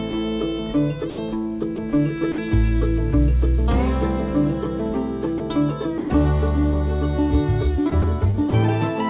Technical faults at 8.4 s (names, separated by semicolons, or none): sound chopped by the voice detector